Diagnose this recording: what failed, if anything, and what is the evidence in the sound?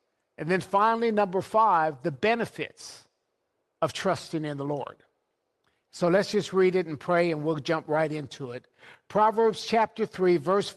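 Nothing failed; no faults are audible in this recording.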